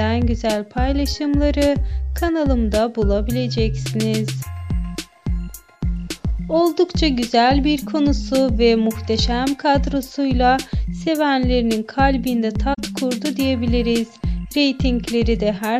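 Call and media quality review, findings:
Corrupt frame concealed, 12.73 to 12.79 s: damaged span about 60 ms long. Probable component: AAC decoder concealment. Flipped bits were detected and the damaged span, consistent with two frames, was muted or refilled with a scrambled repeat of the last good spectrum. Spectrogram: brief vertical band of lost or smeared energy. Waveform: no spike.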